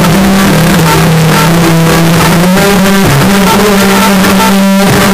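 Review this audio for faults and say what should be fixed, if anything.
The whole clip sounds like float read as integer: blocky, near-square, fierce at an almost fixed, high level, with background noise as loud as the main sound. The likely cause is 32-bit float samples being read as 32-bit integers, so sign and exponent bits drive the level. To prevent it, make sure the reader checks the file's sample format flag and decodes float data as float.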